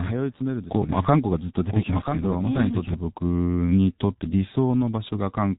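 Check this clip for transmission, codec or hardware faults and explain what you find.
Two faults are present in this speech clip: low-bitrate codec damage throughout, and a doubled audio track over the first part.

The G.723.1 codec affects the whole clip. Nothing is audible above 3.8 kHz, and the degradation is heavy, consistent with a bitrate around 6.3 kbit/s. This codec encodes speech in 30 ms frames and adapts its vocal-tract model slowly, so short transient detail is smeared across frames. The result is muffled, hoarse speech with blurred, indistinct consonants.

The doubled audio track runs from the start to 2.94 s and is already under way when the clip begins. A second full-band copy of the speech trails the original by about one second, roughly 5 dB quieter, with no reverberant tail or room colouring. That points to a separate capture path or an edit that left two unsynchronised copies, likely a second, slower capture path. 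At 2.94 s the copy stops abruptly rather than decaying.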